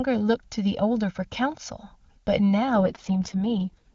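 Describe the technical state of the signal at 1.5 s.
At 1.5 s the sound carries channel delay comb filtering, present throughout the clip. One channel arrives roughly 1.5 ms late and the two are summed. Evenly spaced notches result, the first near 400 Hz, giving a hollow, phasey tone.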